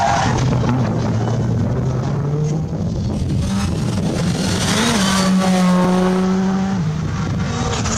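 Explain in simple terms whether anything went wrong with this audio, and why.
From 3.13 to 6.24 s, periodic clock jitter, roughly 3 kHz, wobbles the converter's timing, giving a metallic edge that vanishes in silence, unlike steady hiss.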